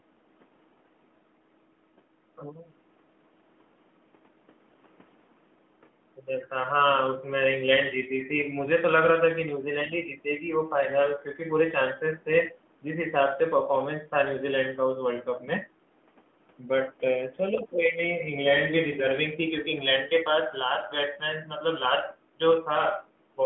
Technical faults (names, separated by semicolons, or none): none